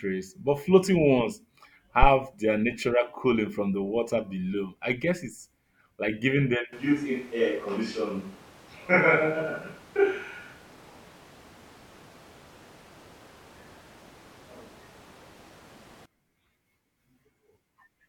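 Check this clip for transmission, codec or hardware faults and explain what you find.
Two hardware faults are audible. A phantom power thump lands at 2.03 to 2.08 s: switching supply voltage on a live input sends a step through the coupling capacitors. It is a deep, fast thump decaying within about 12 ms, with no consonant attached, unlike a plosive. From 6.73 to 16.05 s the sound turns roomy and hollow, with thinner bass and background noise around 25 dB below the speech, likely a switch to a distant microphone. It starts and stops abruptly at nearly unchanged level, unlike gradual drift or added reverb.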